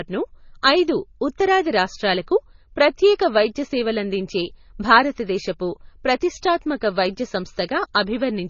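Speech, and the whole clip carries the smeared, swirly sound of transcoding between lossy codecs. Nothing gets above about 6.9 kHz, and low-bitrate MP3 artefacts sit under a second codec's own coloration, which fits a likely chain of roughly 24 kbit/s MP3 re-encoded to Opus.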